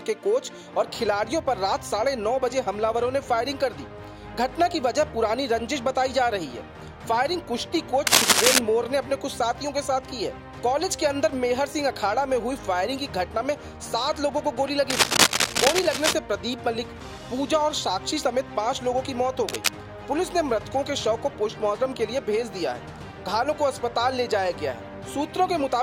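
A worn cable, connector or control is likely being moved, its contact resistance jumping about and causing cable scratch noise: dense, uneven scratching bursts at 8.07–8.59 s and 14.9–16.13 s, about 5 dB above the sound, and a shorter burst at 19.49–19.68 s, roughly level with it.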